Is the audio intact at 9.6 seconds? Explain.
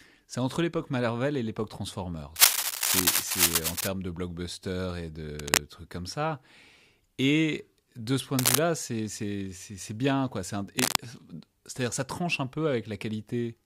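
Yes, the speech at 9.6 seconds is intact, with no dropout, click, distortion or other fault audible at that moment.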